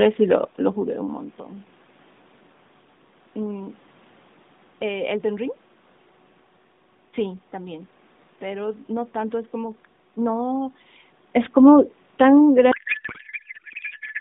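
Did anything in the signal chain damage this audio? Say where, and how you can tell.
Yes: a codec payload misread from 12.72 s to the end, which fits octet-aligned AMR being parsed as bandwidth-efficient. Speech turns to garbled warble, and spectrogram formants dissolve.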